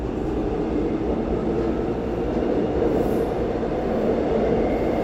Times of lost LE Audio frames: 0.39-0.41

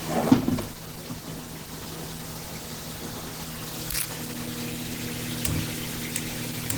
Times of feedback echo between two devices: none

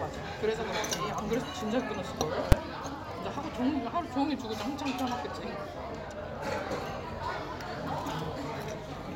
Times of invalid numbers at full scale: 2.52

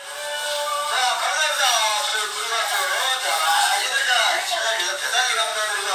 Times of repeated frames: 2.05-2.10, 5.44-5.49

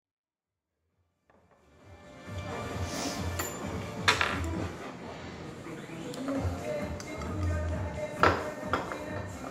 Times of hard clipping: none

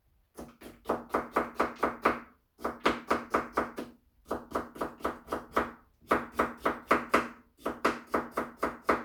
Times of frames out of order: none

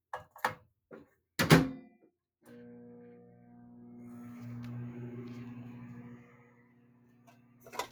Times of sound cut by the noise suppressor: 0.00-0.35, 0.60-1.38, 2.10-2.46, 6.01-7.92

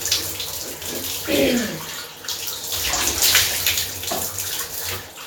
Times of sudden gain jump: none

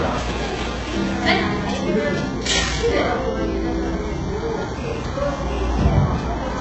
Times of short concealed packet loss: none

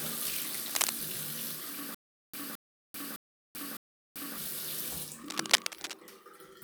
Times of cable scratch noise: 0.68-0.90, 5.23-5.95

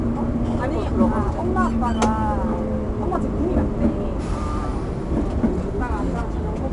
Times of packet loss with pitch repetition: none

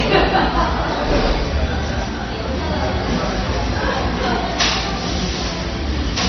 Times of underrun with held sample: none

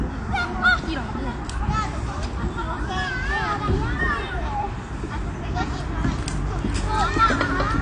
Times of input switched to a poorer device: none

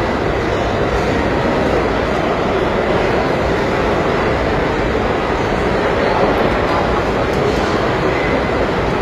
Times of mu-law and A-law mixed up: none

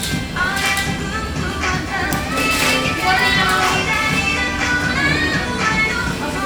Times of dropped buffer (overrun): 0.99, 2.37, 4.48, 5.92

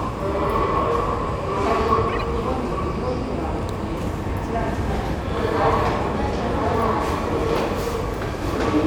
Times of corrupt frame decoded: 2.09-2.23

